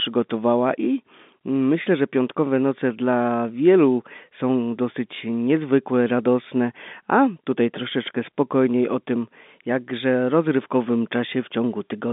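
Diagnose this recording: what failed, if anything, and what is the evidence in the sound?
Nothing stood out on listening to this speech; what can be heard is the ordinary narrow band of a telephone line, with no content above about 3.7 kHz.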